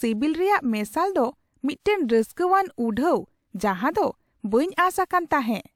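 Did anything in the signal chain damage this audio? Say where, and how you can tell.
No, nothing in the chain audibly damaged this speech.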